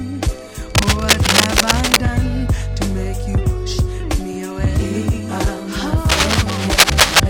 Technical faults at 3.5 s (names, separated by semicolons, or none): none